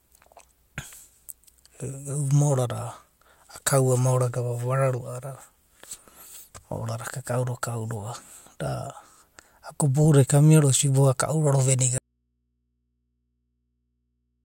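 At 11.98 s the speech cuts off abruptly in an audio dropout to a faint residue lasting to the end. Only mains hum remains, about 50 dB down, likely from a live open input. The waveform collapses to a thin trace, and the spectrogram shows only low hum lines.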